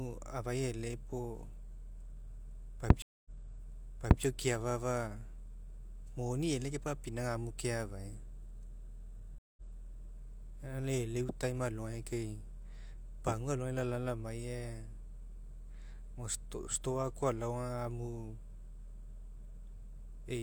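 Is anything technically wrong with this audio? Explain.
Yes. A stream reconnect occurs twice in this speech, at 3.02 to 4.23 s and at 9.38 to 9.62 s. The connection dropped and the player restarted its decoder mid-stream. The first brings 232 ms of silence, then the speech resumes about 0.98 s earlier, so a stretch repeats. The second brings 185 ms of silence, then the speech resumes roughly a tenth of a second later, skipping material.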